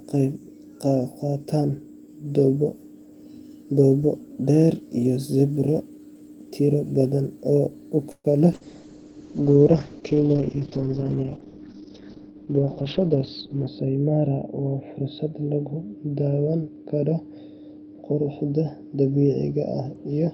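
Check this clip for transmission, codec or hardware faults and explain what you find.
Four faults are audible, all from about 8.1 s onward.

Call audio freeze, 8.11 to 8.27 s: the last sound stretches into a fading buzz or hiss and then about 40 ms of silence. Packets were likely held up and the jitter buffer ran empty, so roughly 128 ms of gap was inserted with nothing lost.

Call bitrate drop, 8.55 s to the end: the speech turns rough and muffled, with the top cut near 6 kHz. The encoder fell from 40 to 7 kbps, staying at its lowest for about 5.2 s.

Short concealed packet loss, 8.56 to 8.63 s: a brief smear where about 40 ms never arrived, so the receiver extended the preceding sound and blended it back into real audio.

Jitter buffer speed-up, 12.18 to 13.83 s: speech sounds hurried at unchanged pitch, running at about 107%. The receiver trimmed short pitch-period pieces, about 150 ms in total, to reduce excess buffered delay.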